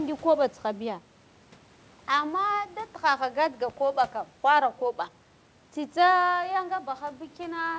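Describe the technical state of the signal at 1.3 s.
At 1.3 s the speech is intact, with nothing beyond the steady 8 kHz band limit of the call path and faint room noise about 33 dB below the voice.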